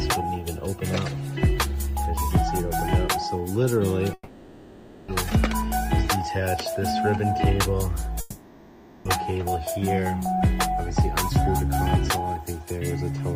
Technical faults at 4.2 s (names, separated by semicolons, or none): long network dropout